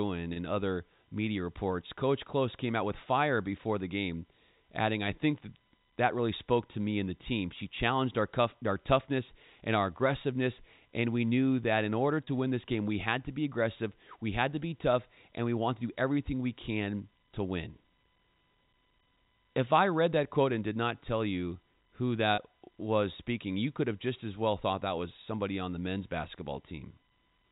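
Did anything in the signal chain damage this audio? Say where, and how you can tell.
Yes, at the network stage: packet loss with pitch repetition. At 0.33 s (before "other media reports"), 12.24 s (between "knew that in order" and "win this game we") and 22.35 s (between "not tell you who" and "was speaking you could"), a 30 ms gap, which fits one lost packet, is filled by repeating the last pitch period, heard as a brief held buzz.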